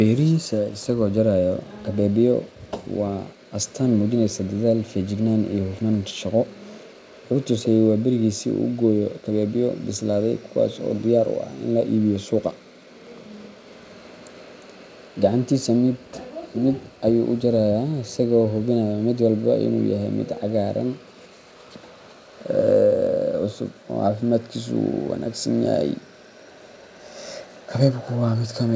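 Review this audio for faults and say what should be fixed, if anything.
Echo leak: from 21.57 to 22.13 s and again from 26.69 to 27.03 s, a very faint, delayed copy of the speech trails the original by 382 ms, sitting roughly 35 dB below it. The likely cause is a far-end loudspeaker whose echo canceller let residual pickup through. Unlike room reverberation, which smears continuously from the first instant, this is a discrete repeat after a fixed gap. Tuning the far-end canceller's delay estimate and using a headset there would prevent it.

Background gated by the echo canceller: the room sound drops out briefly from 23.75 to 23.87 s, around a tenth of a second, and then intermittently between 26.11 and 27.7 s, about a third of a second in total, falling by about 40 dB at its deepest. A noise gate or noise suppressor would follow the local speech level. These dips instead line up with far-end playback, which is why the second one overlaps the echo scraps. 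It is the canceller ducking the microphone while the loudspeaker plays. Gentler suppression or comfort-noise insertion in the canceller would keep the background steady. The G.722 path's limit of nothing above 8 kHz is expected for that codec.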